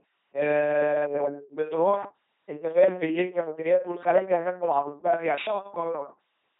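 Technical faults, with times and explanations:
Throughout, LPC-10 vocoder: speech comes out as a buzzy robot, every instant either pulse-driven or noise-driven, with nothing above 3.8 kHz, which fits 2.4 kbit/s coding.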